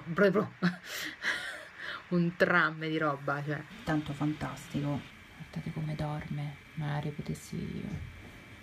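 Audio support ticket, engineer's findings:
Nothing stood out on listening; no findings to log against this clip.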